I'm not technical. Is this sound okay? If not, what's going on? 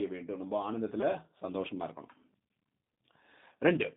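No, the speech sounds thin, slightly rough and a bit robotic from start to finish, like a cheap internet phone call. That's G.729 codec damage. The codec rebuilds the voice from a simplified model, keeping only a narrow phone-line band and dropping everything above about 3.8 kHz.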